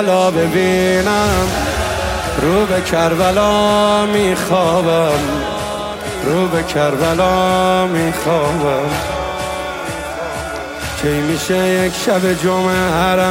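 There are no technical faults to describe in this audio.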